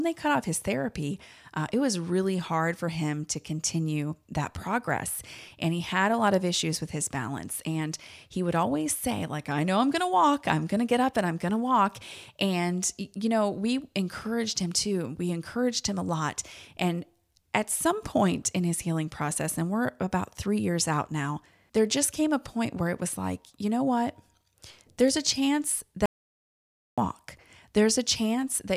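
Speech, with an audio dropout to silence from 26.06 to 26.98 s, just after "a chance". For about 0.92 s the signal falls to silence with no room tone, then resumes mid-flow; the likely cause is a momentary loss of input while recording continued.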